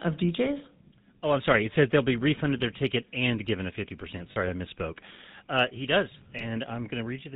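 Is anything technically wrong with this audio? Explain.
Yes. The whole clip carries GSM full-rate codec damage, plainly audible. The codec models the vocal tract and drives it with sparse, regularly spaced pulses, with nothing above 4 kHz, at a rate that fits 13 kbps. You get a buzzy, gravelly roughness over everything.

There are also two spots of lost GSM frames: 4.32 to 4.37 s, just before "I misspoke", and 6.38 to 6.43 s, right after "he does". The decoder covers each gap by replaying the last good frame, so the sound briefly smears into a rough, metallic ring.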